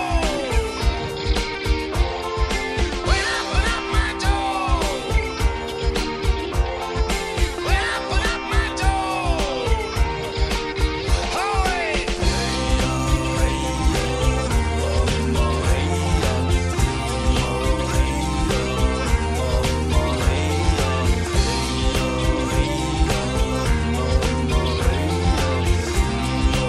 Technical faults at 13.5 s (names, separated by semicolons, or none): DC step